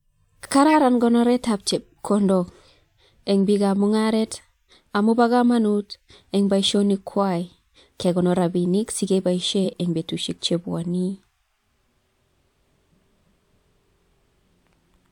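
A short glitch cuts through the speech from 0.69 to 0.76 s, just before "konoret ab chepkondok", and a louder one follows from 9.65 to 9.73 s, just before "eng bestushek chebwonei". Both are a corrupt frame decoded. Flipped bits in the compressed stream were played anyway, so misread gains and codes spread energy into the wrong frequencies for about two and then three frames' worth of audio.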